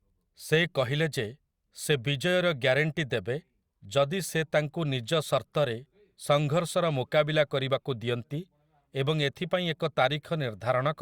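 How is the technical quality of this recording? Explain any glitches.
No technical faults can be heard.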